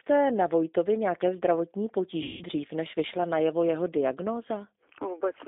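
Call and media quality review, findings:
G.729 codec, whole call: audible roughness and a slightly synthetic edge throughout. Band runs roughly 250 Hz to 3.7 kHz, so no air on top. That's the 8 kbit/s CELP coder rebuilding speech from a filter, pitch predictor and sparse pulses. Codec damage plainly audible.

VoIP packet loss concealed by the speech codec, 2.23 to 2.44 s, after "nějaké zdravotní": about 180 ms missing, fits nine lost 20 ms packets. Decoder stretches the last pitch and filter into a fading buzz or coloured noise, and it's still weak or distorted going into "než vyšla najevo jeho".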